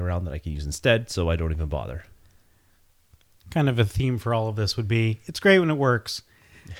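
Speech, no technical faults audible.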